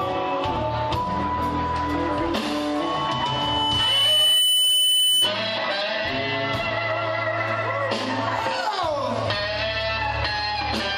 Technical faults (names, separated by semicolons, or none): loudspeaker feedback squeal